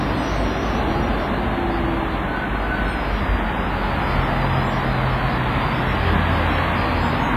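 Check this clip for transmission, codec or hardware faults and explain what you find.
One fault runs through the whole clip: heavy transform-codec damage, most likely WMA compression at a low bitrate near 24 kbps. The codec quantises long blocks coarsely, so noise smears over tens of milliseconds around each event and weaker components drop out. The result is ringing, washy sound with a hiss that swells and fades with the signal. A spectrogram shows nothing above 15.4 kHz, a hard shelf, plus blotchy, gappy patches where faint detail has been zeroed.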